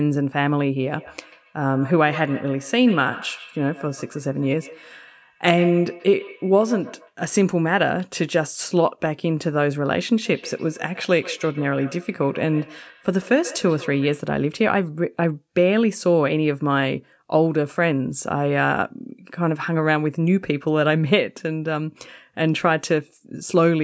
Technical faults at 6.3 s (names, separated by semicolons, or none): feedback echo between two devices